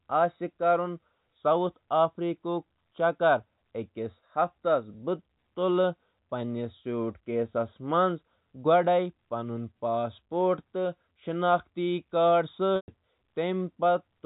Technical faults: packet loss with pitch repetition

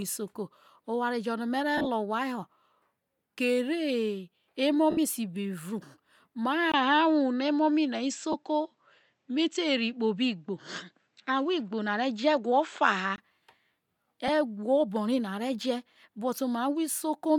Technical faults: lost LE Audio frames; input switched to a poorer device

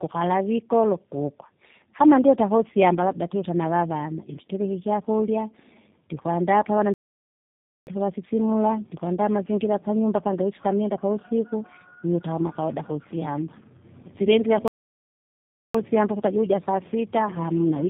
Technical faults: tandem speech coding; playback stall

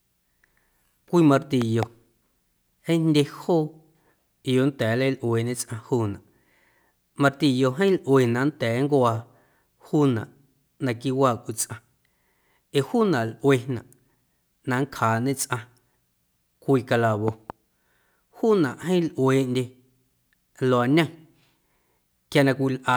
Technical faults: loud pop

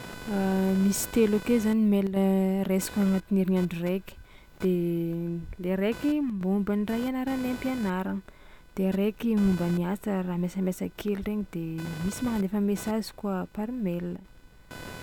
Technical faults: computer activity noise; one channel drops out

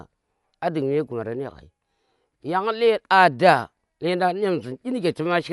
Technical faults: Dolby Digital compression

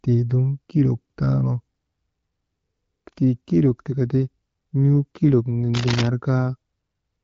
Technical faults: cable scratch noise

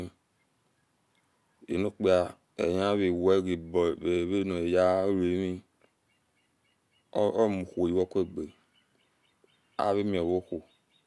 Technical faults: none

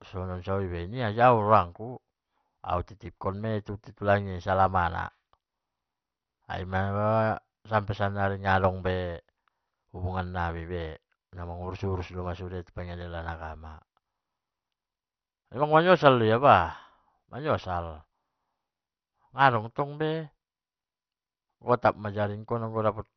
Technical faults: MP2 compression

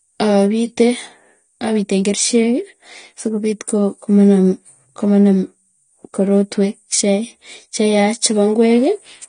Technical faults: AAC compression

